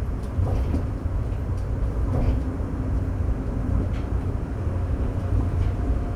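No technical faults are audible.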